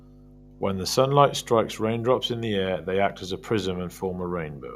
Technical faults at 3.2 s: mains hum

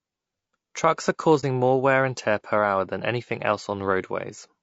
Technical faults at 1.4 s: low-delay AAC compression; AAC frame loss with muting

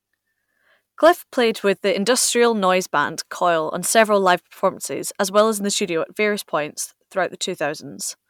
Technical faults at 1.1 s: hard clipping

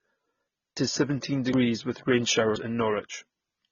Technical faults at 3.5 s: transcoding between lossy codecs

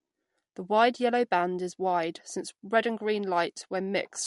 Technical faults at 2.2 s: MP3 compression

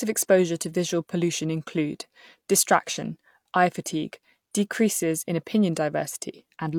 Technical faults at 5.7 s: none

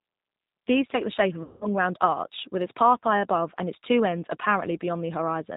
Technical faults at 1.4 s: G.729 codec; VoIP packet loss concealed by the speech codec

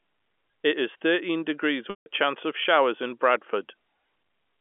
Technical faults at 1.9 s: packet loss with pitch repetition

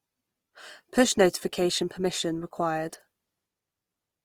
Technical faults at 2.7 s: Opus compression

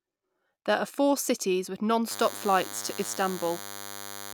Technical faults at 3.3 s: DECT cordless phone buzz

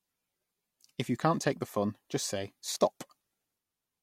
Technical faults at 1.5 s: none

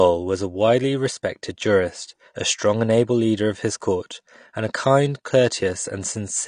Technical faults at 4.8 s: AAC compression

